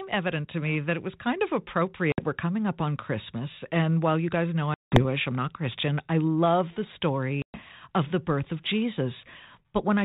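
Packet loss on an ADPCM call hits this speech at 2.12 s, 4.74 s after "while you guys know", and 7.42 s after "I love the", before "of the birth of". Gaps of 60, 180 and 120 ms turn to hard-edged silence, then the decoder's predictor and step size, knocked out of step, bring speech back slightly distorted. The band-limited sound fits G.726 ADPCM at 32 kbit/s.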